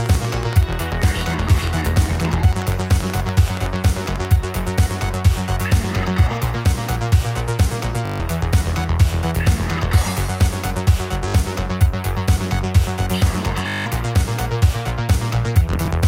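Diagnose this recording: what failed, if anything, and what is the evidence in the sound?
A train of clicks, most likely interference from nearby equipment or a faulty connection or power supply at the analogue or converter stage, runs from 0.06 to 4.26 s. It is about fifty near-identical pulses at a regular 10.5 per second, peaking roughly 10 dB above the audio and ticking through the pauses too.

At the network stage, the Bluetooth link lost or delayed packets, and the receiver looped its last buffer until data returned. This Bluetooth stutter is heard at 8.06 s (142 ms lost), 11.28 s (61 ms), 13.68 s (183 ms) and 15.74 s (41 ms scattered over 142 ms). Each is a repeated slice before the sound resumes further on.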